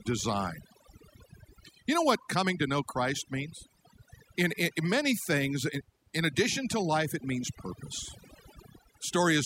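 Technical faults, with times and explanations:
Throughout, overdone noise removal: overly aggressive reduction gates frequency bands near the noise floor, leaving near-silent background with twinkling specks; spectrograms show scattered isolated blobs amid blank gaps.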